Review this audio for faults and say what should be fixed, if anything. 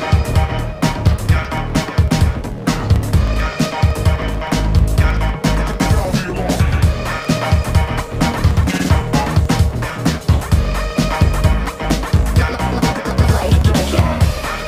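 A steady run of ticks sounds from 0.94 s to 14.62 s, one every 0.063 s (about 16 per second), only where sound is present. These are periodic USB or driver dropouts: a recurring stall skips roughly a millisecond of audio each time. Preventing them means finding and disabling the background task or power-saving setting that stalls the USB bus or driver, or enlarging the audio buffer.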